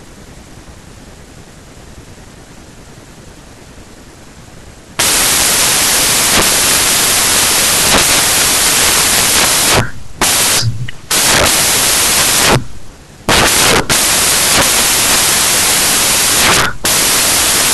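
From the first moment to the end, the speech is buried under loud, hissing white noise, the signature of samples built from the wrong bytes. Each sample's bytes are assembled in the wrong order or at the wrong offset, so the rapidly varying low-order bits land in the high-order position and dominate every value. The waveform looks like a solid, dense block, and the spectrogram shows flat, dense energy across all frequencies.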